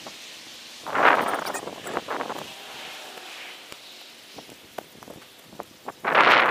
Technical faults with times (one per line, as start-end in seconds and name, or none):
3.72 electrical switching spike